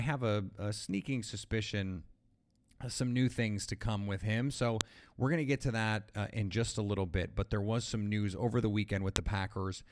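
File header played as audio at 4.81 s and 9.16 s in this speech recording: sharp clicks where joined WAV pieces kept their header bytes, which were decoded as samples.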